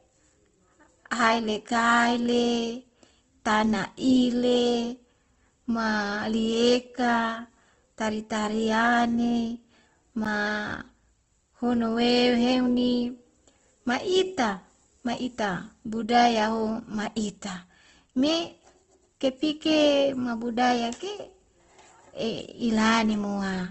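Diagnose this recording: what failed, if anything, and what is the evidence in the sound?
The codec stage is the likely culprit for the damage that runs through all of this speech. Nothing is heard above 8.1 kHz, so the band is cut to wideband. The remaining sound is grainy and rough, and the damage is plainly audible. That points to Opus compression in its music mode at a low rate, near 16 kbps. Starved of bits, it keeps each band's energy but fills the detail with folded or noisy content.

A block of digital silence sits at 10.25 s. It lasts about 10.7 ms. The sound drops to zero and returns with no fade, and the gap registers as a tick. This failure is probably in the driver or buffer stage. The length fits a 512-sample buffer, which suggests the program did not fill the output buffer in time, so the output played zeros.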